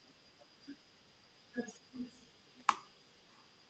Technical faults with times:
2.21-2.66 echo leak
3.31-3.46 echo leak

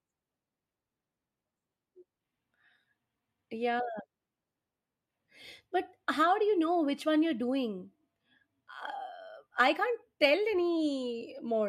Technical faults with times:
none

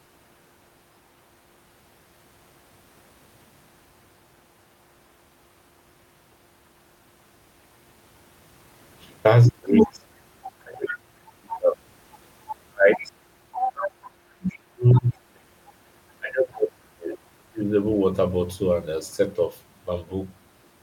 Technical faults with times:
9.49-17.75 speech suppressed in double talk
9.77-17.18 other side's voice leaking through

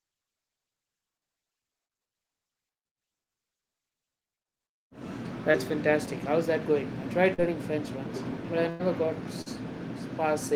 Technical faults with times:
5.51-5.56 short concealed packet loss
7.34-7.40 short concealed packet loss
8.70-8.81 burst of packet loss
9.41-9.48 short concealed packet loss

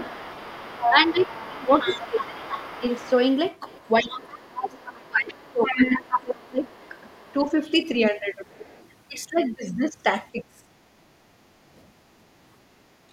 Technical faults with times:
0.00-8.85 other side's voice leaking through
0.90-7.63 speech suppressed in double talk
10.32-10.69 speech suppressed in double talk
10.97-11.67 background gated by the echo canceller

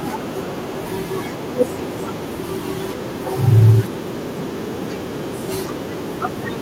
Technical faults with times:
0.00-6.62 echo with no canceller

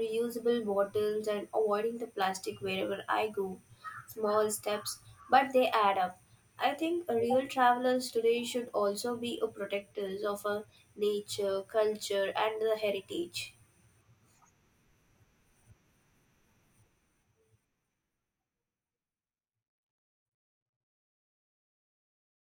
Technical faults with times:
none

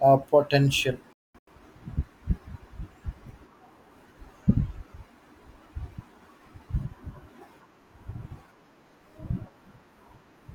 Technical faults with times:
1.13-1.51 digital broadcast dropout

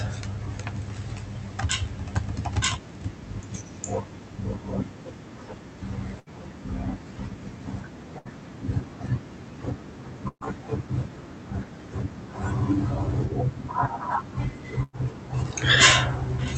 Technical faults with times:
6.19-6.29 burst of packet loss
8.18-8.30 burst of packet loss
10.28-10.46 burst of packet loss
14.83-15.07 burst of packet loss

